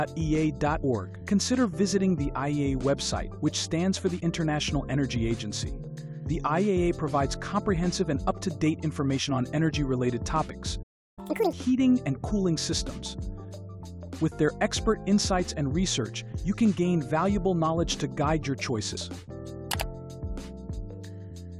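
Compressed frames skipped at 0.83 s, 4.17 to 4.20 s and 10.48 to 10.50 s. Whole frames of the encoded stream never reached the output, so the audio jumps forward: about 70 ms is lost at 0.83 s and about 20 ms at each of the other two. At each join the sound briefly lurches ahead.

A playback stall follows from 10.82 to 11.19 s. The sound cuts off in mid-flow and leaves about 0.34 s of silence before it resumes. The likely cause is that the player's buffer ran dry or its thread was blocked, so nothing was sent to the output until it recovered. The gap sounds abrupt and empty, not like a fade.

Catch-up at higher speed runs from 11.19 to 11.53 s, straight after the stall. The player plays out its backlog at 2.0 times normal speed by resampling, which squeezes the audio in time and raises the pitch by roughly ten semitones, producing a brief chipmunk-like rush. After that, speed and pitch drop back to normal.

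Compressed frames are skipped once more at 18.96 s, where about 70 ms disappears and the audio jumps ahead.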